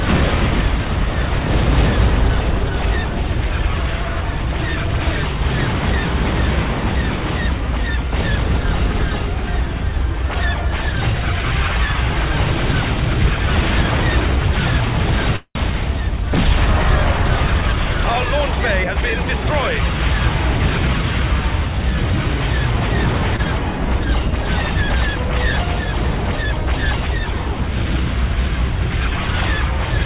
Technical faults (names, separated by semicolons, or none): call audio freeze; jitter buffer speed-up; short stall from a late packet